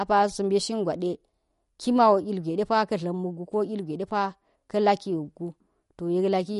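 Likely MP3 compression at a low bitrate, in the region of 48 kbps, runs through the whole recording: starved of bits, the encoder removes everything above 11.2 kHz and zeroes weak frequency lines that flicker in and out from frame to frame. The speech sounds dull and clearly processed, with a watery, swirling quality around its quieter components, metallic chirps on s sounds, and smeared consonant onsets.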